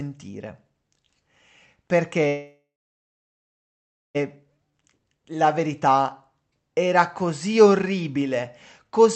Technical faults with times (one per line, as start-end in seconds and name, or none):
2.27-4.17 call audio freeze
4.71-5.05 jitter buffer slow-down